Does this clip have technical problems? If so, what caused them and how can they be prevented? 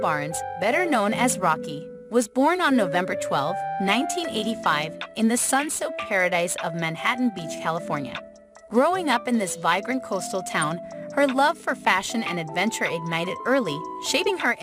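Yes. At 3.92 to 3.94 s the clip has a corrupt frame decoded: bits inside a couple of compressed frames were flipped, and the decoder played them instead of rejecting them. The damaged gains and codes sent energy to the wrong frequencies for those frames, which comes through as a short squeaky blip or burst of noise laid over the audio. Prevention: carry the stream with checksums or error detection so damaged frames are caught and concealed instead of decoded.

At 14.25 to 14.28 s there are compressed frames skipped: frames of the encoded stream were lost from the file or discarded by the decoder as damaged, so playback jumped ahead by about 30 ms. That slice of the sound is simply missing. Prevention: store and transmit the file over a reliable path and verify its integrity so no frames go missing.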